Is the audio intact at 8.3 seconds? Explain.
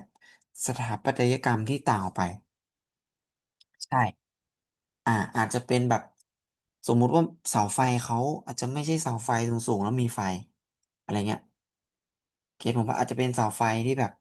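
Yes, the audio is intact at 8.3 seconds, with no fault to be heard at that point in the speech.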